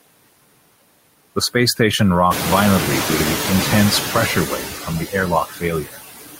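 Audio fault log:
Throughout: noise suppressor artifacts. The suppressor pulls down the steady background by about 21 dB, working frame by frame. So the noise drops away in the gaps and comes back up underneath the speech.
2.3 to 4.09 s: noise suppressor catching up. The room noise jumps by about 13 dB at roughly 2.5 s, ending up only about 7 dB below the speech. The suppressor's noise estimate is still tuned to the quieter room. So the louder noise passes with only about 6 dB of reduction at first. Over about 1.8 s the estimate adapts, and the noise audibly sinks back down. The room noise itself is part of the recording, not a system fault.
5.49 to 5.63 s and 5.82 to 5.99 s: speech cut by the noise suppressor. In both spots the suppressor mistakes part of the speech for noise. Gain drops by as much as about 15 dB, over a short stretch of roughly a seventh of a second each time. Quiet speech detail is turned down along with the background. 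It sounds swallowed and faint.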